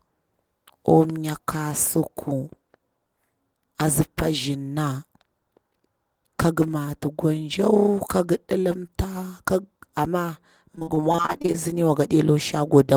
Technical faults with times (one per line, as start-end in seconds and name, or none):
10.75-11.56 repeated packet loss (robotic sound)